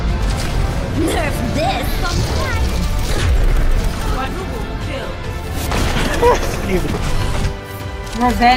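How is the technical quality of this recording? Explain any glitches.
Two glitches stand out. Both are loose connector crackle, at 1.35 to 1.49 s and 6.77 to 6.99 s. A worn contact makes and breaks, chopping the signal into brief, irregular scratchy bursts.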